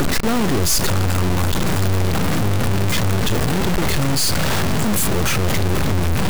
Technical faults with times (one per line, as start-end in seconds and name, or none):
0.00-6.30 stuck bit